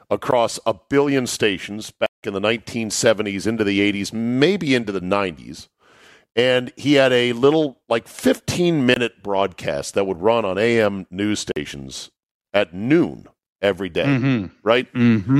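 Four times, the audio path dropped a block of samples and put zeros in their place, so the speech cuts hard to digital silence and back. This block of digital silence first lands at 0.31 s as a tick before "a billion stations". From 2.06 to 2.23 s, between "a billion stations" and "in the", it becomes an audible hole. At 8.94 to 8.96 s it pops before "broadcast that would run", and at 11.52 to 11.56 s the 46 ms gap fits a 2048-sample buffer.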